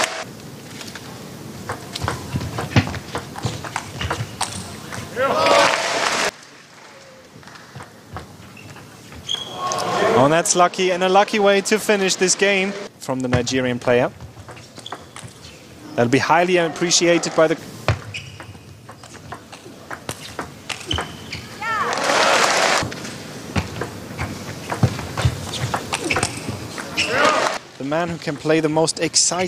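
No technical faults can be heard anywhere in the recording, and the signal holds steady throughout.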